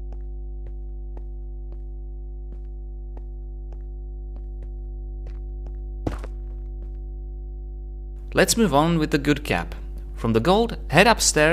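Mains hum runs throughout: a steady 50 Hz tone with low harmonics, about 15 dB below the signal, from power-line coupling through a ground loop or nearby transformer.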